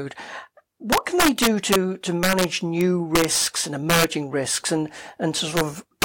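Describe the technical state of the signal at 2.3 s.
That's integer overflow, from about 2.23 to 2.44 s: peaks pushed roughly 6 dB too hot wrap to the opposite sign, so the speech cracks harshly.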